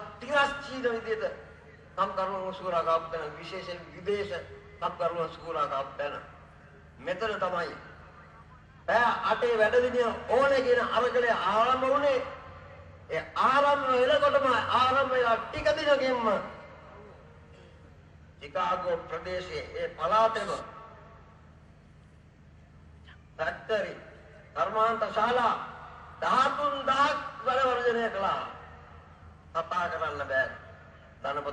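No technical faults are audible.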